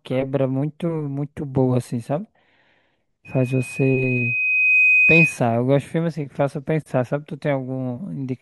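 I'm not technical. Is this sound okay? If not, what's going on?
No. From 3.25 to 5.41 s there is loudspeaker feedback squeal. The microphone hears its own speaker, and a 2.5 kHz whistle builds over about a second and a half.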